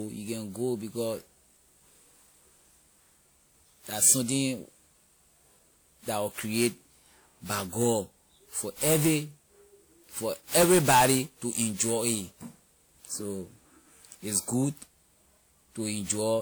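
Throughout the speech, the sound is swirly, smeared and hollow, with blurred attacks, though content still reaches 20.1 kHz. This is likely generation loss: repeated WMA decoding and re-encoding, around seven passes at what sounds like about 96 kbit/s, each requantising on a shifted frame grid.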